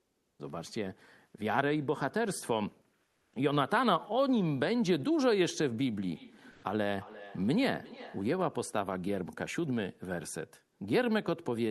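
From 0.00 to 0.39 s, the background is replaced by comfort noise. The real room sound gives way to a flat, featureless hiss, about 2 dB quieter. The likely cause is Opus discontinuous transmission: the sender stops sending during the pause, and the receiver makes up a noise roughly shaped like the background. The same happens from 3.07 to 3.31 s, this time about 3 dB quieter.

From 6.12 to 8.43 s there is feedback echo between two devices. One device replays audio that another microphone in the room picks up again. Each sound returns after roughly 0.4 s, fainter and more ringing, peaking about 19 dB below the speech. Inside that stretch, from 6.51 to 6.63 s, comfort noise again stands in for the background, about 1 dB louder than the real background. The Opus call path cuts off the highs above 12 kHz throughout.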